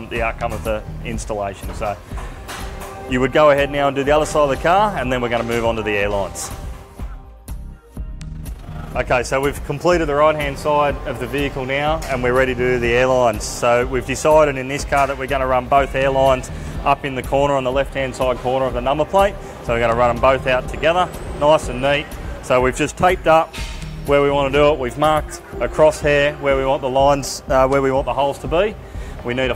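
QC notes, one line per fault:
8.24 to 9.08 s, overlap-add ripple: the level pumps up and down by about 6 dB at around 30 times a second, giving a fast, rough flutter. The windowed frames were rejoined with an overlap that doesn't add up to a steady gain, so each frame leaves a bump.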